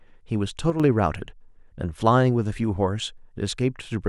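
Speech, with a brief fault where one channel drops out between 0.7 and 0.8 s. For about a tenth of a second the level falls abruptly by about 6 dB before recovering, consistent with a stereo source summed to mono while one channel is likely lost.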